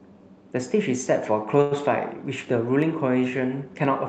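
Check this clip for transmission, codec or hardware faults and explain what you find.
There's one fault, a short stall from a late packet, at 1.61 to 1.73 s. A packet showed up late, the jitter buffer ran dry, and the receiver stretched the last bit of speech for about 98 ms before carrying on from the same spot. So nothing's lost, but the sound hangs a beat too long with a faint buzzy smear, and everything after it lands about 98 ms later. The call path itself is audible in the clip's top end, which stops around 8 kHz, as you'd expect from Opus.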